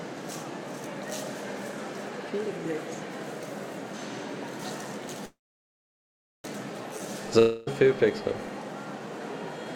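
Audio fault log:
5.25–6.46 s, call audio freeze: the last sound briefly continues as a fading buzz, then goes silent for about 1.1 s before resuming where it stopped, so nothing is lost but the audio runs 1.19 s later. The likely cause is delayed packets emptying the jitter buffer. On a spectrogram, a smeared tail gives way to a blank band. On the waveform, it is a flat line.
7.39–7.75 s, long network dropout: a fading buzz fills about 0.28 s with no true silence, and the audio returns with roughly 0.28 s of the original missing. The likely cause is packets that never arrived. A spectrogram shows a smooth, featureless fill ending in an abrupt jump back to detailed content.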